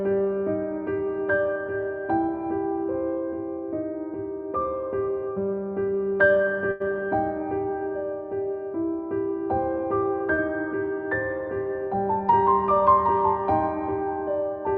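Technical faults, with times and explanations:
6.71–6.82 s and 10.34–10.40 s, short stall from a late packet: a packet showed up late, the jitter buffer ran dry, and the receiver stretched the last bit of sound, about 86 ms then 38 ms, before carrying on from the same spot. Nothing's lost, but you hear a brief held, slightly buzzy smear, and playback sits that much later afterwards.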